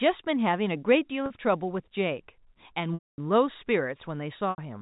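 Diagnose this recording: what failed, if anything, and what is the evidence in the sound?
Network packet loss with pitch repetition at 1.26–1.30, 2.94–3.18 and 4.50–4.58 s: the receiver loops the last pitch period, holding briefly, fading to silence within the 240 ms gap.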